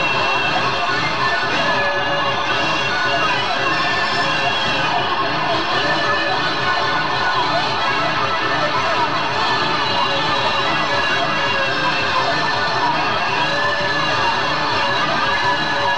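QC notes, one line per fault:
Nothing here needs flagging; the audio comes across without any problems worth a note.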